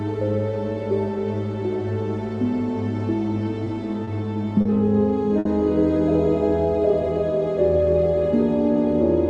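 You can hear four short stalls from late packets at 3.64, 4.04, 4.61 and 5.39 s, where the jitter buffer runs dry and the sound gets held for about 20, 30, 40 and 60 ms before picking up where it left off, with nothing lost. The band-limited top end, cutting off around 12 kHz, points to an Opus call path.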